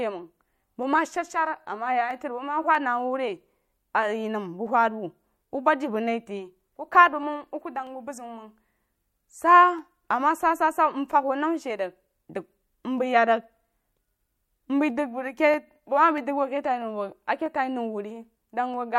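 Clock drift buffer slips run from 0.19 to 18.74 s in this speech, heard as a regular click every 0.64 s, about thirty in all. The likely cause is two clocks disagreeing by roughly 300 ppm, forcing the buffer to drop or repeat a few samples each time.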